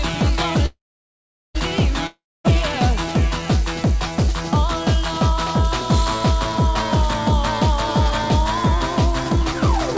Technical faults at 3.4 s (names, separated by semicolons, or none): none